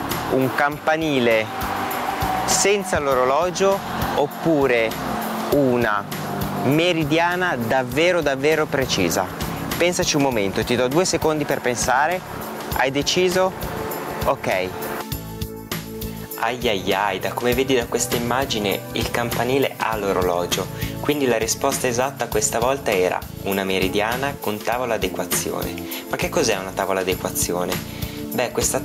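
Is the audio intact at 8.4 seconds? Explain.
No. At 8.4 seconds, as across the whole clip, the gain swings by around 10 dB. This is gain pumping, likely from excessive gain driving a fast limiter.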